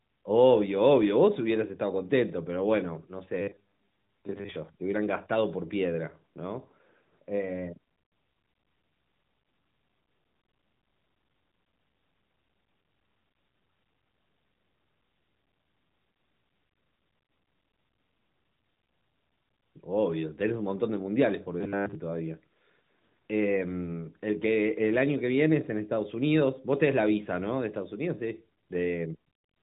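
Robotic sound from repeated short buffers runs from 3.42 to 4.57 s. The speech becomes a rigid metallic buzz at 100 Hz, most likely because audio arrived too seldom and the player looped the last 10 ms over and over. Much of the real speech in that span is skipped, heard through AMR-NB narrowband coding with nothing above 3.8 kHz.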